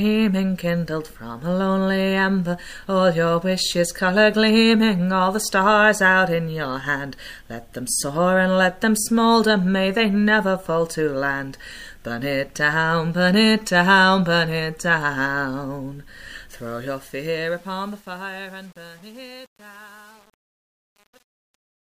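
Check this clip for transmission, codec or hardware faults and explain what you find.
One fault is audible: truncation distortion on the fade-out, which begins around 16.5 s. From 16.52 s to 21.9 s, and worst after 16.97 s, the fade passes through an undithered stage that fits an 8-bit path. The waveform breaks into square steps, and the tail turns gritty. A spectrogram shows broadband hash instead of a clean taper.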